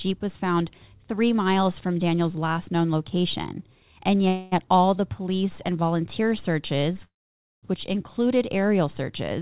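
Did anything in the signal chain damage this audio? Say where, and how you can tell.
Yes, two call audio freezes on the network side of the call path. At 4.28 s the sound stalls for about 0.24 s, filled by a smeared continuation of the last sound. At 7.05 s a longer one runs 0.58 s, with that fill decaying into roughly half a second of silence. The likely cause is late packets draining the jitter buffer. Playback then picks up exactly where it stopped, so nothing is lost; it's just pushed later, under the narrowband 4 kHz ceiling of the G.711-style codec.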